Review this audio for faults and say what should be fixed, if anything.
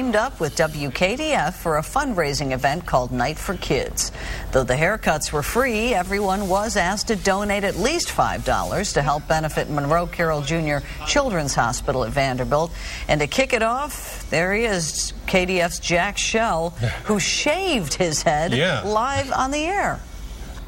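No faults; nothing needs fixing.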